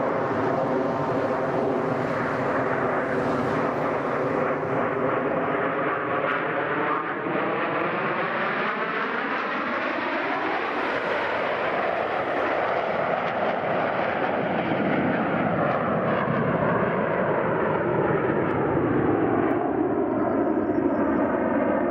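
At 18.51 s a single sharp click cuts through the audio, showing as a thin vertical line across the spectrum. This is likely dropped samples: a couple of samples, a tiny fraction of a millisecond, vanish, so the waveform jumps abruptly.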